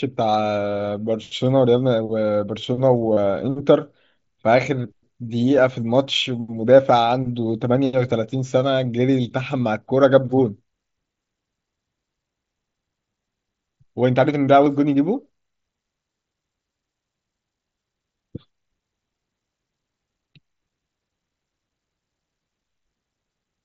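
At 3.13 to 3.17 s, and again at 14.65 s, concealed Bluetooth headset packet loss occurs: voice packets from the headset never reached the phone over the wideband mSBC link, and the receiver filled each gap by repeating the closest-matching recent stretch of waveform. The first gap lasts about 37.5 ms, long enough to leave a brief buzzy, held tone with a slight warble as real sound resumes. The second, 15 ms long, is a shorter buzzy stretch.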